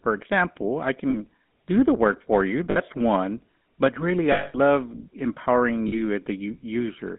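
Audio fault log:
throughout: GSM full-rate codec. Band runs about 200 Hz to 3.7 kHz with a buzzy, gravelly roughness from pulse-driven vocal-tract modelling, unlike plain band-limiting, which fits 13 kbps full-rate coding.
1.10–1.17, 2.70–2.78, 4.32–4.58, 5.88–5.94 s: lost GSM frames. Lasting 40, 60, 220 and 40 ms, they fall after "example I" and before "do the work for", after "the work for you", and at two unmarked points. In each, the last good frame repeats as a metallic ring rather than a clean dropout.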